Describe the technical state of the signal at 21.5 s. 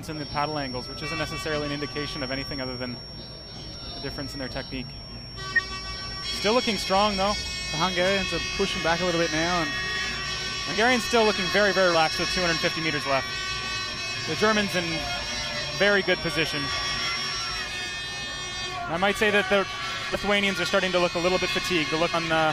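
At 21.5 s the audio is intact, with no fault present at that moment.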